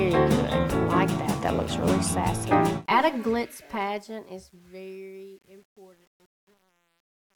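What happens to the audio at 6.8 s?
Truncation distortion on a fade affects 6.8 s, part of a span from 3.13 s to 7.39 s that is worst from 4.11 s onward. As the sound fades out toward 7.4 s, the level stage drops the low bits without dither, which fits a path keeping only 9 bits. Near the smallest step the waveform collapses into coarse square steps, so at 6.8 s the tail sounds gritty.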